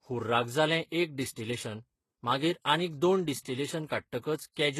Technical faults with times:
0.00-4.79 transcoding between lossy codecs

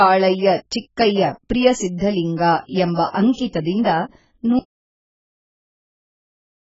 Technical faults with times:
0.00-6.68 AAC compression
1.98-2.00 pre-echo
2.95-2.98 pre-echo
3.33-3.38 pre-echo
3.83-3.86 pre-echo
4.59-6.68 audio dropout to silence

